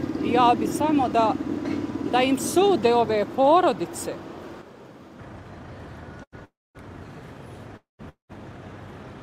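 At 6.23 s there's a short stall from a late packet: for about 90 ms the last bit of sound gets held and stretched with a faint buzz, because the jitter buffer ran dry, then it picks up exactly where it left off with nothing lost.

Then come three call audio freezes, at 6.45 to 6.77 s, 7.77 to 8.01 s and 8.09 to 8.31 s. Each holds the last sound as a fading buzz that drops into silence for roughly 230, 150 and 120 ms. That's likely packets held up in transit, with the audio resuming intact but pushed later.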